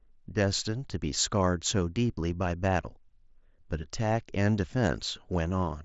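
Nothing's gone wrong in this one: it's just speech coming over an mSBC Bluetooth headset link, so the top end runs out around 7.7 kHz, and there isn't any fault to point at.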